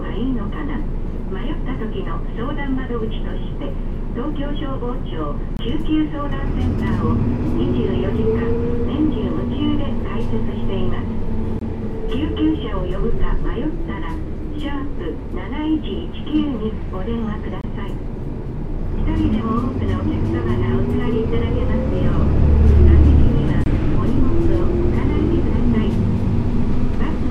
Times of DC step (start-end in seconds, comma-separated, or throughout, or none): none